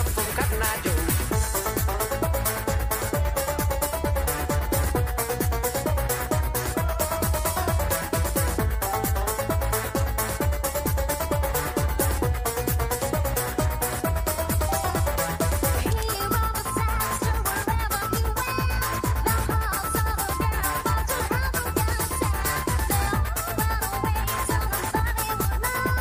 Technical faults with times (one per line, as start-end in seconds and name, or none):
none